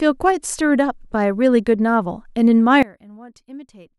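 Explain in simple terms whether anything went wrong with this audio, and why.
At about 2.83 s the speech suddenly drops away and stays very faint until the end, as if the voice had almost disappeared. The likely cause is one channel inverted: one side of the stereo signal has been flipped upside down. When the two sides are combined into a single channel, the voice, which sits equally in both, cancels itself out. Only the small differences between the sides remain, which is the faint trace you still hear.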